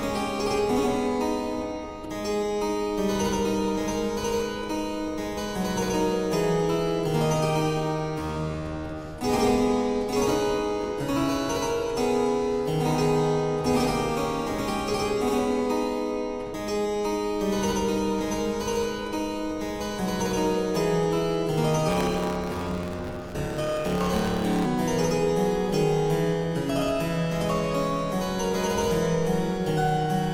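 From 21.88 to 24.66 s the audio shows a block size mismatch, with truncated blocks. A 109 Hz buzz appears, and playback runs 1.16 times fast at near-normal pitch, which fits 512-sample blocks losing their ends.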